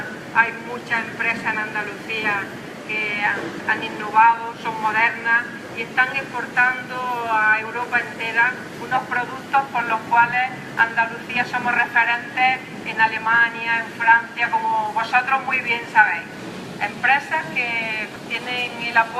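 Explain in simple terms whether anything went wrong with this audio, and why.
Nothing went wrong here: the recording comes through steady and intact, with no technical faults to point to.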